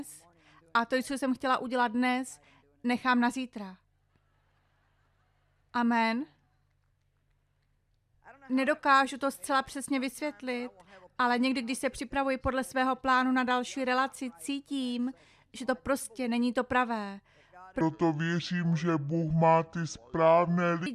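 From 17.81 s to 20.86 s there is a section at the wrong speed: the audio runs at 0.633 times its proper rate, so everything turns slow and deep, dropping roughly seven semitones. The likely cause is playback or editing against a mismatched clock. What separates it from a pitch shift or a time-stretch is that tempo and pitch fall together and the change starts abruptly at 17.81 s rather than drifting in gradually.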